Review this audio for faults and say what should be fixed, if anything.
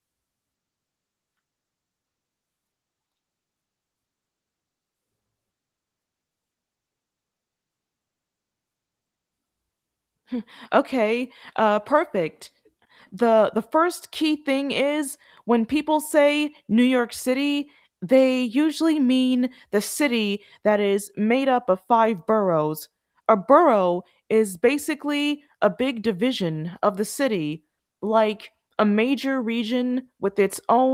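Nothing to fix: the speech comes through Opus voice coding at 24 kbps in hybrid mode with full bandwidth kept, and no fault is audible.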